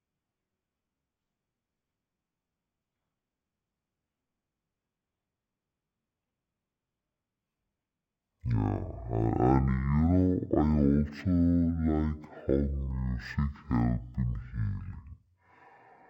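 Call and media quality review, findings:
Stereo read as mono, whole clip. Speech at half speed, an octave low; faint mirrored copy in upper spectrum. Probable component: decoder or file reader channel handling. Interleaved left/right samples consumed sequentially as one channel, doubling duration and halving pitch.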